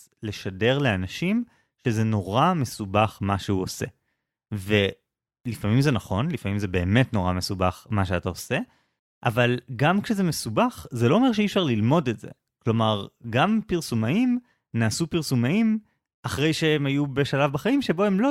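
No technical faults are audible anywhere in the recording.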